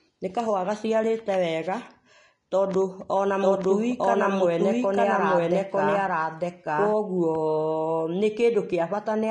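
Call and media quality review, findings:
Grainy, hissy treble throughout, nothing above 10.6 kHz, blurred onsets: likely Vorbis compression at a low bitrate, fitting about 33 kbps. Noisy residue rather than the metallic warble of other codecs.

Doubled audio track from 3.41 s to 6.93 s: a full-band second copy about one second behind at roughly equal level, likely from an out-of-step capture path. It starts and stops abruptly, with no decay, unlike acoustic echo.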